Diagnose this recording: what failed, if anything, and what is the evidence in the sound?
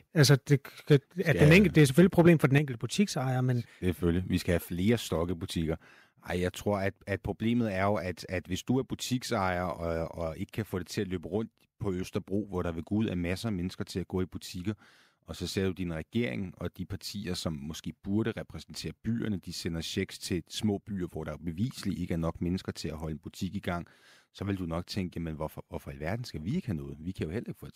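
Microphone overload at 0.91–0.96 s and 1.41–2.31 s, before "for den": flat-topped, crackling peaks about 4–5 dB over full scale, likely clipping at the converter.

Microphone volume stepped down by about 7 dB at 2.58 s, before "butiksejer men", and about 3 dB at 5.31 s, after "skal have flere": voice and background drop together in one step rather than fading.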